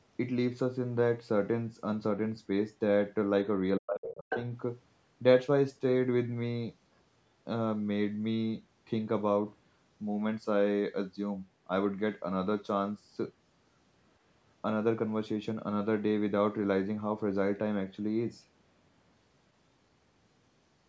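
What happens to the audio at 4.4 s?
Around 4.4 s the talker's speech has just come out of a deep dip. From 3.79 to 4.35 s it falls away, at worst by around 40 dB, so it nearly vanishes. This is speech suppressed in double talk: with both sides talking, the echo canceller likely mistook the talker for echo and attenuated everything.

From 4.3 to 4.41 s a brief scrap of a second voice breaks through, only a little quieter than the main speech. This is the other side's voice leaking through: the far end's loudspeaker playback likely reached the microphone, and the echo canceller didn't fully remove it.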